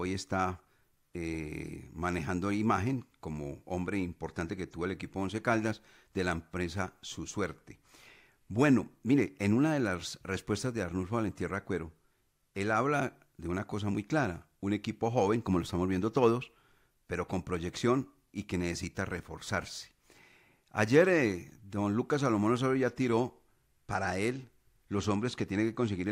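At 23.86 s, running to the end of the clip, the speech shows a Bluetooth SBC bit pool drop. The treble goes dull and a gritty noise appears, which fits the bit pool falling from 28 to 14, roughly 108 kbps, starving the upper sub-bands and coarsening the rest.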